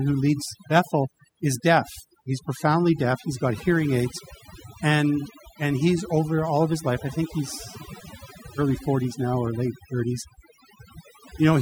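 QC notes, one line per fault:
Throughout: overdone noise removal. Noise reduction set too aggressively gates individual frequency bands whenever they sit near the estimated noise floor. Low-level parts of the speech are cut along with the noise. The result is a lowered background dotted with twinkling artefacts. A spectrogram shows isolated bright specks scattered across empty gaps and ragged, hollowed-out speech harmonics.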